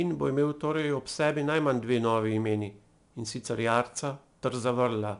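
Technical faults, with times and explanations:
Throughout, 4-bit ADPCM compression: each sample is coded as a coarse 4-bit predicted step, leaving plainly audible gritty hiss that tracks the speech level, with nothing above 10.6 kHz.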